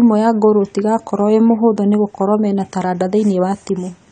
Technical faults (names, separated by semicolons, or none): AAC compression